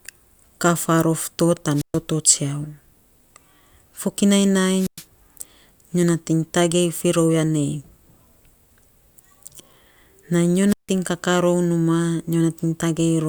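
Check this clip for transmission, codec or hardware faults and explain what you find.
Three wireless microphone squelch dropouts occur, at 1.73–2.00 s, 4.75–5.05 s and 10.67–10.91 s. Each time the radio link fades, hiss rises, and the receiver's squelch mutes the speech for 0.11–0.16 s. That hiss lead-in distinguishes them from clean digital packet-loss gaps.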